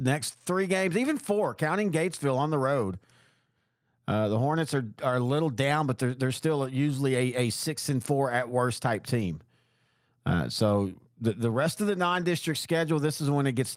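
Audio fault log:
6.63–6.65 s after "down but they're they're", 9.19–9.25 s after "four at worst type", 12.09–12.23 s after "the rest of the": lost packet rebuilt from error correction. About 20, 40 and 80 ms play as rougher, noisier low-bitrate copies, with no gap or fading repeat as concealment would give.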